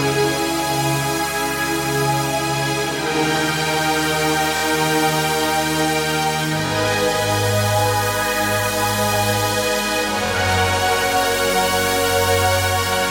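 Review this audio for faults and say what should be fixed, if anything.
Repeated buffer stutters at 4.57, 6.66 and 10.26 s. Each time, a 23 ms piece plays three times with hard joins, which fits a 1024-sample buffer. Keep the playback buffer fed on time, or enlarge it, so the device never has to replay old audio.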